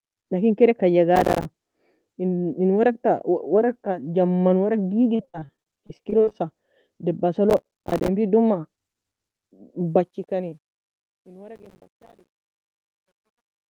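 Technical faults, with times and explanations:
1.16–1.45 s, 7.50–8.08 s and 11.56–12.34 s, processor overload crackle: three bursts of gritty tearing laid over the speech, each getting longer. The processor kept missing its deadlines for tiny buffers, which fits buffers of around 5 ms, and each miss dropped a sliver of silence with hard edges. Strung together, dozens of these in a row turn into that crackly rasp. The last burst lands inside the fade, so it stacks on the grit there.
5.15–6.36 s, repeated packet loss (robotic sound): this stretch goes choppy. There are 17 separate holes, the longest about 50 ms, and each one gets patched by stretching out the last bit of sound. They come so close together that about a third of the span is patched rather than real audio, which gives it that robotic feel with bits missing.
9.80 s to the end, truncation distortion on a fade: the fade-out starting around 10 s turns gritty toward its tail. 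The fade was computed at only 11 bits with no dither, so as the level sinks toward the smallest step the waveform collapses into a few coarse stairs. From about 11.3 s it's at its worst, sounding grainy.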